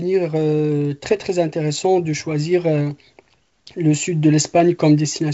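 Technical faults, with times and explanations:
1.05–1.23 s, bit errors on an ADPCM link: flipped bits derail the decoder's step size and predictor, leaving pops and rough bursts with brief level jumps.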